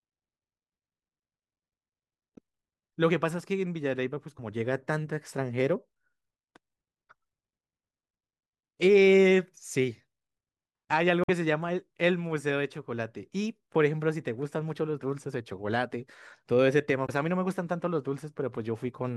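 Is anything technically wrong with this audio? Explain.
Yes. Damaged data in a compressed stream shows up four times in this speech clip: 2.34 to 2.38 s, at 4.38 s, 11.22 to 11.30 s, and 17.05 to 17.10 s. At each spot, some of the encoded bytes are corrupt, so the decoder misreads the affected frames, loses its place in the bitstream and has to hunt for the next valid frame header. Each event is a brief chirp, squawk, click or short hole cutting across the speech, the longest being the one near 11.2 s.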